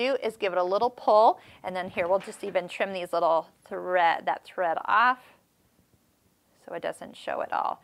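No technical faults can be heard anywhere in the audio.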